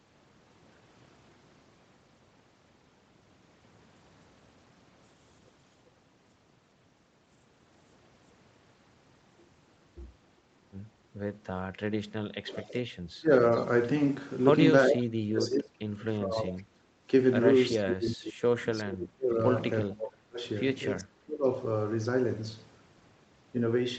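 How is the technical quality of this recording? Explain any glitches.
The trouble sits in the echo canceller on this call: during the second half it repeatedly mistakes a talker for loudspeaker echo, letting echo through and gating the background. All of it plays out over a band that stops at about 8 kHz, as an Opus call path would give.

Background gated by the echo canceller, at 12.02 to 12.13 s and again at 17.04 s: the canceller clamped the microphone while the far end's audio was playing. The room tone sinks by about 15 dB for roughly a tenth of a second, then by about 9 dB for a brief instant.

Speech suppressed in double talk, at 12.41 to 13.3 s, 14.87 to 17.09 s, 17.83 to 20.44 s and 21.01 to 21.47 s: with both ends talking at once, the canceller could not tell the talker from echo and attenuated everything. The voice dips sharply, up to about 30 dB. Double talk is the likely cause.

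Echo leak, at 12.54 to 12.73 s and 14.89 to 15.07 s: a loudspeaker-side canceller likely failed to scrub its microphone signal, so a copy of the voice returns about 400 ms late. The first scrap is faint, about 20 dB down, while the second arrives at roughly the same loudness as the speech.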